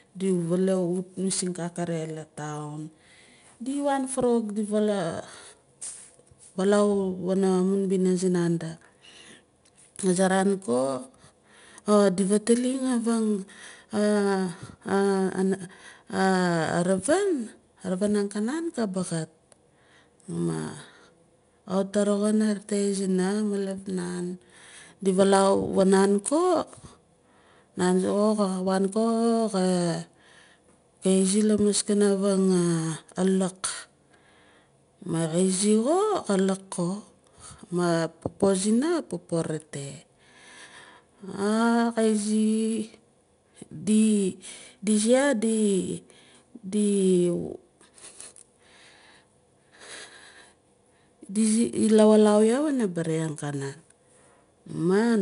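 Throughout the speech, 4-bit ADPCM compression codes each sample as a coarse step from a prediction. The resulting noise tracks the signal, giving plainly audible grit on loud syllables and roughness on sharp onsets. Nothing remains above 10.6 kHz, which fits roughly 89 kbps.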